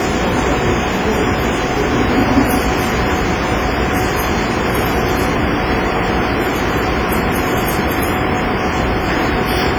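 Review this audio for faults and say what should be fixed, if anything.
Heavy transform-coding damage runs through the whole clip, likely from WMA compression. The sounds ring and smear. Quantisation noise spreads over tens of milliseconds around each event, so the sounds turn washy. A hiss rises and falls with the signal. Quieter detail drops out, as if weak spectral lines were zeroed. The depth of damage fits a low bitrate near 24 kbps. To prevent it, keep an uncompressed master or encode at a much higher bitrate.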